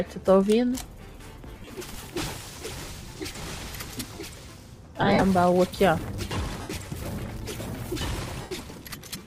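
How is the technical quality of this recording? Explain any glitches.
The recording has five brief dropouts caused by lost LE Audio frames. The lossy compression leaves only light damage.

Lost LE Audio frames occur at 1.60–1.72 s (90 ms missing, scattered across 120 ms), at 3.38 s (15 ms), at 5.01–5.23 s (112.5 ms across 210 ms, the longest gap around 50 ms), at 6.61–6.74 s (97.5 ms across 120 ms, longest around 70 ms) and at 8.41–8.51 s (97.5 ms). The LC3 decoder fills each gap by repeating the last spectrum with randomised phase, so tonal content smears into a brief noisy blur. The longer runs sag toward silence.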